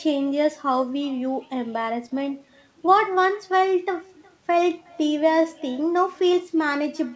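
Right from the start there's echo with no canceller. The far end is evidently playing the call on a speaker and feeding it back, so every phrase returns roughly 0.4 s later as a faint, thin shadow about 27 dB below the speech.

Running under the whole clip is clock drift between sender and receiver. The sender's clock seems about 3 percent slow, so the jitter buffer keeps draining and the receiver has to pad out the audio to keep playback going.

You hear that as repeated timing corrections from 0.06 s to 7.11 s. Small stretches are repeated at uneven spacing, all in the same direction, adding around a fifth of a second in total and pulling the pace to 97 percent. The call path underneath tops out at 8 kHz, which fits a G.722-style wideband codec.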